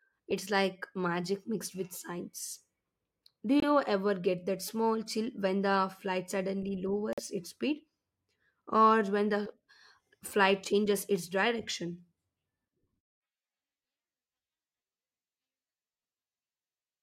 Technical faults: Bluetooth dropout

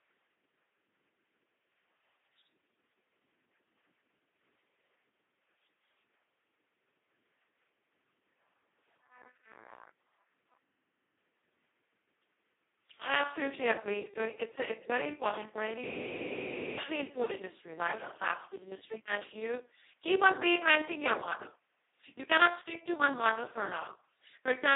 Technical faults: Speex codec; system hang loop

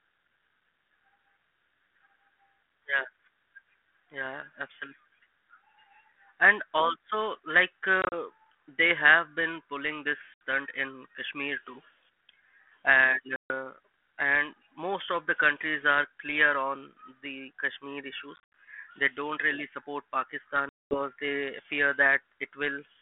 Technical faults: packet loss on an ADPCM call

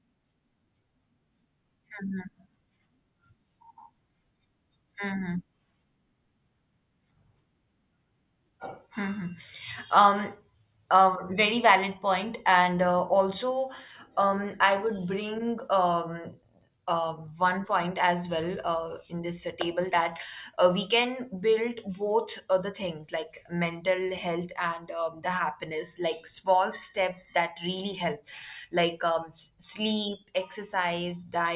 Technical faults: none

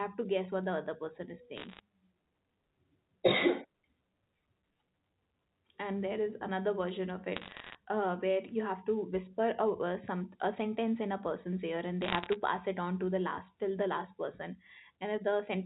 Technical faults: bit errors on a digital phone line

